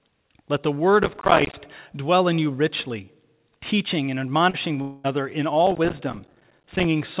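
Speech, heard through a call path with nothing above 4 kHz as G.711 mu-law would give, carries three kinds of fault. Processor overload crackle runs from 1.03 to 1.54 s, between "the word" and "dwell in you richly", and again from 5.67 to 6.84 s. A dense, gritty tearing of tiny hard-edged silent gaps rides on the sound, fitting many missed buffers of about 5 ms each. Unlike packet loss, there is no smoothed fill, just rapid clicking that stops when the load passes. Short concealed packet loss at 4.50 to 4.56 s, right after "you richly teaching and", drops about 40 ms. The decoder bridges it by continuing the preceding sound for 35 ms, giving a brief smear rather than a click. That separates it from the crackle's hard edges. From 4.82 to 5.06 s about 220 ms is missing, likely a long network dropout. It is heard as a stretched continuation of the last sound that fills the whole gap and never falls to silence. 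Its length sets it apart from the brief 4.50 s smear just before.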